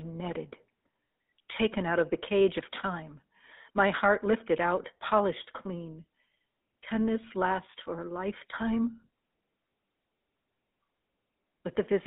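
GSM full-rate codec damage runs through the whole speech clip, from start to finish. The band sits roughly between 200 Hz and 3.7 kHz, so the low body and all the upper brightness are gone. The codec rebuilds the voice from a vocal-tract model driven by a sparse, regularly spaced pulse excitation, which fits the 13 kbps full-rate coder. That coarse excitation gives the plainly audible buzzy, gravelly roughness.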